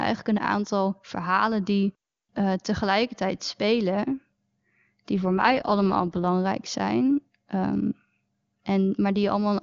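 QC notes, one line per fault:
5.18–6.27 s, AMR rate drop: the wideband speech coding falls from 23.85 to 8.85 kbit/s, likely from link-driven adaptation. The sound turns rough and synthetic, recovering before "zijn ehm"; the spectrogram shows a blurrier harmonic structure with no gap or band change.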